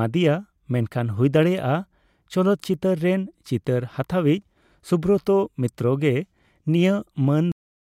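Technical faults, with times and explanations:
7.52 s to end, cut-off end: the speech stops mid-sound because the final buffers were never written, leaving digital silence with no decay. The waveform drops abruptly to a flat line, and the spectrogram shows energy ending in a sharp vertical edge.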